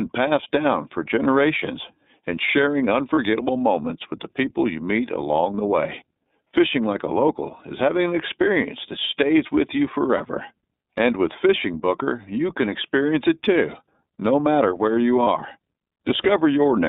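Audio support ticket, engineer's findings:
iLBC codec, full clip: band-limited speech, rough and slightly synthetic. Spectrogram shows energy only between about 200 Hz and 3.7 kHz, nothing above. Damage plainly audible, consistent with iLBC's 13.33 kbps, 30 ms frame mode.

Lost iLBC frames, three events of about 30 ms: 3.15–3.18 s, between "for generations and sharing" and "moments with the people"; 10.17–10.21 s after "that stays with you"; 15.23–15.27 s after "no matter where you". Held buzzy vowel where the decoder repeats the last pitch cycle plus noise. Waveform shows a short stretch of repeated periods, and the spectrogram shows flat harmonic smear. Clean recovery at the next frame.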